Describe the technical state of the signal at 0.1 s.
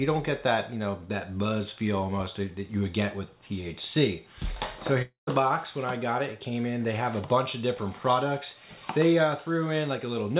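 At 0.1 s the audio is intact, carried through the call path with nothing heard above 4 kHz, consistent with G.711 mu-law coding at 64 kbps.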